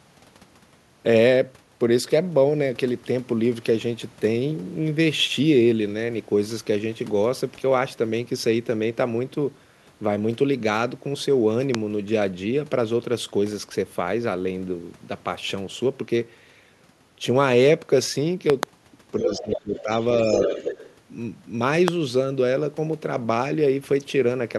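A loud pop lands at 11.75 to 11.77 s, a single sharp spike roughly 20 dB above the surrounding speech, which carries on beneath it. A brief voltage step, most likely from a switch, static discharge or a driver glitch, has been added to the signal, and the circuitry after it shapes that step into a short, hard click-thump. At 18.50 to 18.65 s a second loud pop arrives as two close hits, again about 20 dB proud of the speech.

From 19.2 to 19.9 s the talker's speech is suppressed in double talk. Over about half a second the level dips, by roughly 15 dB at its deepest. The likely cause is an echo canceller that could not tell its own talker apart from loudspeaker echo while both sides spoke, so it pulled everything down. During the same stretch, from 19.27 to 19.82 s, the other side's voice leaks through at about 5 dB below the talker, likely because the canceller left part of the far-end loudspeaker signal in the microphone path. 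A faint scrap of that leak, around 30 dB down, follows at 20.01 to 20.05 s. A stronger leak, again about 5 dB below the talker, runs from 20.25 to 20.95 s. Within it, from 20.46 to 20.62 s, the talker is briefly suppressed again, a shallower dip of about 5 dB lasting roughly 150 ms.

A final loud pop hits at 21.88 to 21.90 s, a single spike of around 20 dB.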